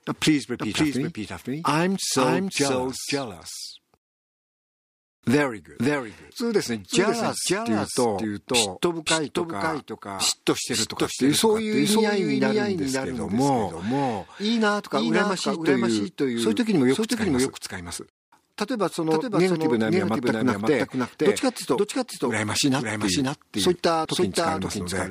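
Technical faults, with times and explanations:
Throughout, doubled audio track: a second, full-band copy of the whole sound trails the original by about half a second, roughly 5 dB quieter, so every event is heard twice. The likely cause is the same signal being captured again through a slower path. Unlike a room echo or reverb, the copy arrives only once, at a fixed gap, with no decay tail, no repeats and no added room colour.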